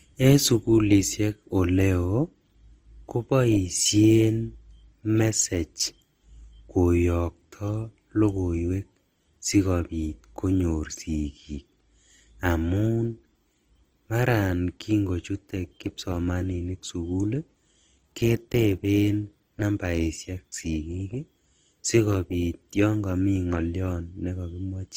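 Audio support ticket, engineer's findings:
Symptom: stacked compression artefacts across the whole speech clip, with the different codecs' artefacts heard together. Probable component: transcoding between lossy codecs, likely an MP3 stage followed by Opus. Sound fits roughly 55 kbit/s MP3 re-encoded at about 24 kbit/s. Spectrogram: content stops near 20.1 kHz; Opus spends bits re-coding the earlier MP3 damage.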